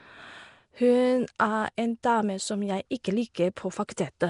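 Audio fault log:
throughout, Nellymoser compression: rough, hissy, underwater-sounding speech with nothing above 10.6 kHz, likely Nellymoser Asao at around 44 kbps filling the starved bands with noise.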